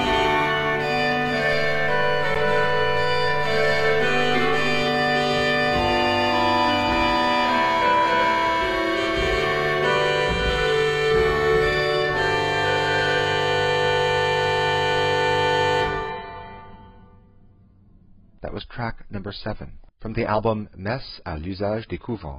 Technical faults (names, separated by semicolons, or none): DC step; block of digital silence; adaptive stream at a lower bitrate